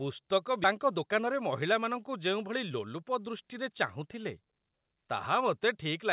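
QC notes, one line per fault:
0.64–0.66 s, skip ahead: Playback jumps forward with no gap filled, so about a second of speech is missing and the two sides of the cut are butted together almost directly. Later audio was already queued when this stretch was discarded, either lost in transit or dropped by an overflowing jitter buffer. The result is an abrupt splice rather than a silence or a concealment artefact, heard through the 4 kHz band limit of the G.711 A-law call path.
0.80–3.03 s, jitter buffer speed-up: Across this span the speech runs at about 107% of normal speed while the pitch stays put, so delivery sounds slightly hurried. The receiver's jitter buffer was holding more audio than its target, and to bring the delay down it repeatedly cut out short segments one or a few pitch periods long, removing roughly 150 ms in total. Because whole periods are removed, timing compresses without any shift in pitch.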